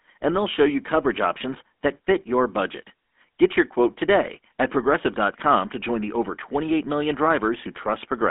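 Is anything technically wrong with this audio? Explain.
Yes. The speech has been through a GSM full-rate codec from start to finish. The codec models the vocal tract and excites it with sparse, regular pulses, which fits a 13 kbps rate. That gives a plainly audible buzzy, gravelly roughness. The line band runs about 250 Hz to 3.5 kHz, with nothing above 3.8 kHz.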